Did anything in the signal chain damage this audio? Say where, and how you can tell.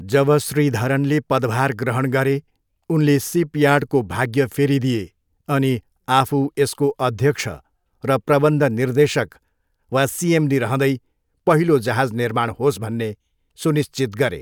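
No, nothing in the chain audibly damaged this recording.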